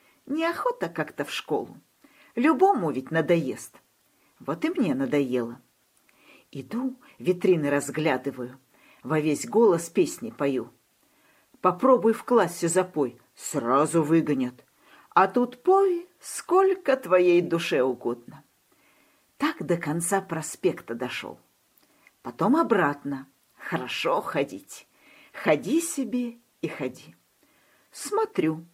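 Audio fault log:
17.43–17.45 s, repeated frames: one compressed block of about 21.3 ms was played twice, so that sliver of sound repeats as a brief stutter and adds 21.3 ms.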